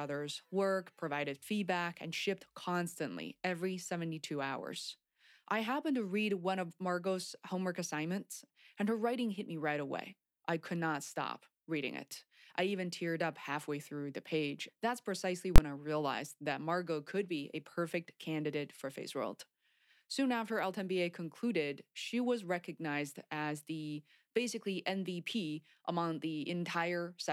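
A single loud bang at 15.56 to 15.58 s, just before "I realized that": invalid numbers at full scale, pinning one roughly 23 ms block, which fits a 1024-sample block, to one extreme value.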